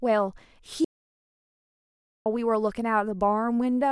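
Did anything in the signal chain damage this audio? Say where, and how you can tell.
Yes. An audio dropout to silence, likely from a lost input link or device, left the recorder writing silence from 0.85 to 2.26 s. The speech stops dead, 1.4 s of silence with no room tone follows, and then it resumes mid-flow.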